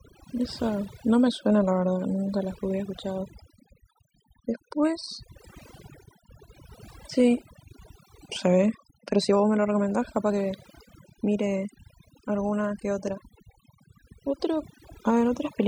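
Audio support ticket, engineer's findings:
Overdone noise removal, whole clip. Noise reduction stage set too aggressive: bands near its noise estimate pulled far down or muted, taking quiet speech detail with them. Result: near-silent background with twinkling specks.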